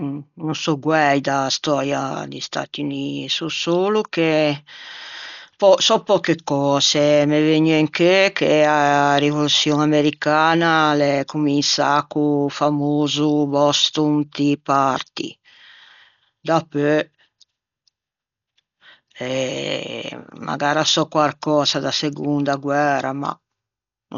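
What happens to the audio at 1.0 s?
At 1.0 s the speech is muffled and dull, with a grainy, fluttering noise clinging to its tones. This runs through the whole clip, not just that moment, and is likely Dolby Digital compression with heavy damage, consistent with a bitrate near 48 kbps. The encoder discards everything above 6.9 kHz, and the decoder fills starved frequency lines with noise. A spectrogram shows a flat ceiling at 6.9 kHz and speckled noise patches around the speech harmonics.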